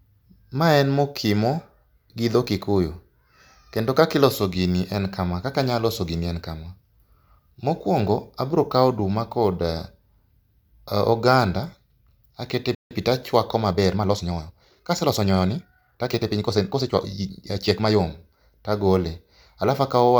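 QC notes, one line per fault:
12.75–12.91 s playback stall: the speech halts for 0.16 s, likely because the player ran out of data. The waveform shows a flat-line gap and the spectrogram a blank vertical column.
13.67–17.97 s time-stretched section: the pace jumps to 1.38x while pitch is unchanged, rushed, likely from short pieces being dropped. Harmonics stay level and syllables compress.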